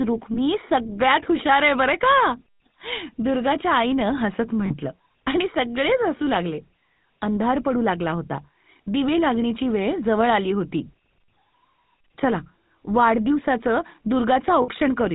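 GSM full-rate codec damage runs throughout. The excitation is coarsely pulsed and thinned, with nothing above 4 kHz, giving plainly audible buzzy, gravelly roughness consistent with 13 kbps coding. Lost GSM frames at 0.34–0.39 s, 4.66–4.78 s and 14.62–14.68 s, roughly 20, 40 and 60 ms of missing audio, which fits one, two and three dropped frames. Each gap is filled by repeating the last good frame, heard as a brief rough, metallic ring.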